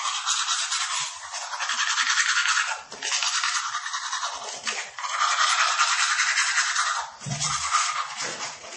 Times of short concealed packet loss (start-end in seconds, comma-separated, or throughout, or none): none